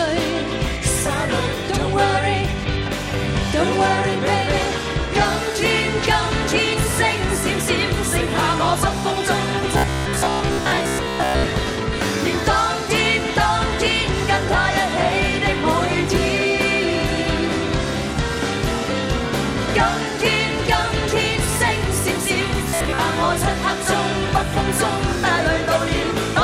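Robotic sound from repeated short buffers appears from 9.77 to 11.44 s and from 22.69 to 23.00 s. The audio becomes a rigid metallic buzz near 66.8 Hz. A roughly 15 ms block is likely repeated while new audio arrives too seldom, so most of it is skipped.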